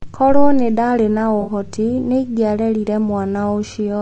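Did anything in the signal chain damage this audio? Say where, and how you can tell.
Yes. At the codec stage, likely low-delay AAC compression near 32 kbps: the speech sounds rough and grainy throughout, with noise between harmonics.

On the network side, AAC frame loss with concealment from 1.41 to 1.51 s: the decoder filled roughly three missing frames, leaving a smeared, noisy patch.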